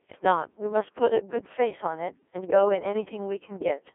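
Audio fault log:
throughout, Codec 2 vocoder: the speech is rebuilt from sine waves rather than carried as a waveform, so it comes across robotic and buzzy, with heavy damage to its natural texture. Only pitch, voicing, energy and a coarse spectral envelope survive, which fits a rate near 1.6 kbit/s. The sound is confined to a radio-style band of 300 Hz to 3.5 kHz, with nothing above 3.6 kHz, so it is thin and lacks sibilant detail.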